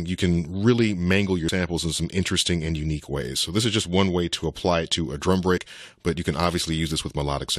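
The audio has compressed frames skipped at 1.48 s and 5.56 to 5.58 s. Whole decoded frames go missing, so the sound jumps ahead by roughly 70 ms and then 50 ms, which fits a few frames of about 23.2 ms each.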